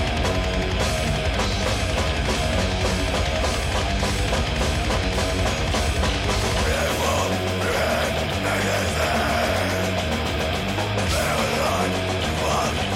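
No technical faults are audible.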